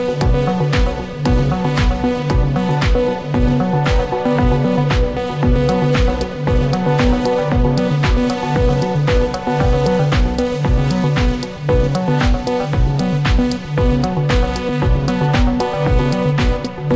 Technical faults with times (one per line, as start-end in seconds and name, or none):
none